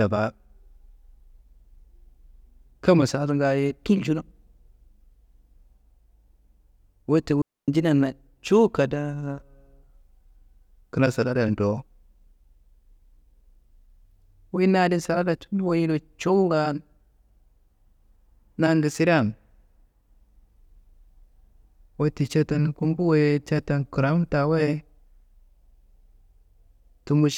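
At 7.42 s the speech drops into a digital wireless dropout lasting about 0.26 s, to 7.68 s. The receiver lost too much of the incoming data stream to reconstruct the audio and muted its output, fading down and back up almost instantly. The result is a clean gap of near silence cut into the speech, with no hiss, crackle or noise burst on either side, before the sound resumes at full level.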